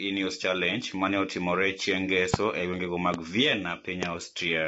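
Throughout, the speech sounds rough and grainy, with nothing above 7.7 kHz, pointing to low-delay AAC compression, likely AAC-ELD at around 24 kbps, whose short frames resolve harmonics poorly. A loud pop, a single sharp burst roughly 25 dB above the speech at the first and 20 dB at the others, lands at 2.34 s just before "e gwenge ma", at 3.14 s just after "e gwenge ma", and at 4.03 s; each is likely a voltage glitch.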